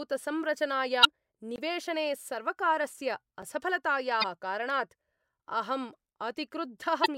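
At 1.01 to 1.05 s, a brief glitch cuts through the speech. This is damaged data in a compressed stream: a stretch of the encoded bitstream is corrupt, so the decoder misreads those frames, loses sync and hunts for the next valid frame header. The glitch lasts about 46 ms.

At 1.56 to 1.58 s, a block of digital silence drops the signal to silence for about 21 ms, which fits a 1024-sample buffer left unfilled. The hard cut out and back in is heard as a short hole. At 3.42 s a second block of digital silence, about 5 ms long and consistent with a 256-sample buffer, is too brief to register as a gap and comes across as a single tick.

The same damaged-data glitch returns at 4.20 to 4.24 s and again at 7.02 to 7.06 s. Each lasts about 46 ms and has the same decoder resync signature.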